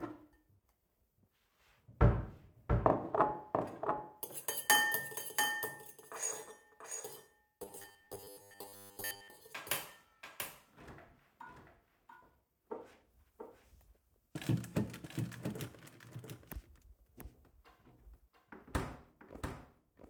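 Throughout the clip, a doubled audio track runs under the sound: a second full-band copy trails the original by roughly 0.7 s at about 5 dB lower, likely because the same signal is captured twice by a slower path. Unlike a room echo or reverb, the copy arrives once, with no decay tail and no added colour, so every event is heard cleanly a second time rather than smearing into the space.

From 7.63 to 9.3 s, the sound turns into a rigid, metallic buzz pitched at 100 Hz. This is robotic sound from repeated short buffers: audio arrives too seldom, and the gap is likely filled by looping the last 10 ms over and over, most of the real material being skipped. The fixed buzz that still loosely follows the sound's contour sets it apart from plain dropouts, which leave silence, and from flanging, which sweeps rather than holding a steady pitch.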